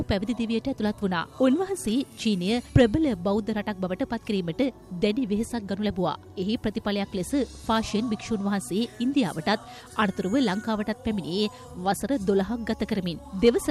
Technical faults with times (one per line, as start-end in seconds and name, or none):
2.76-2.82 hard clipping
13.46-13.49 hard clipping